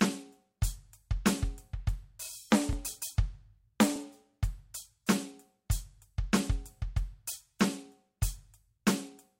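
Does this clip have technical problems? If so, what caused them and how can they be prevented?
Yes. At about 2.73 s the music has a repeated buffer: a piece of roughly 12 ms plays twice, hard-joined, so with a buffer this small it's heard as a click or brief buzz rather than a stutter. That length fits a 512-sample buffer that got replayed because fresh audio arrived late. Bigger buffers or a less loaded audio thread would prevent it.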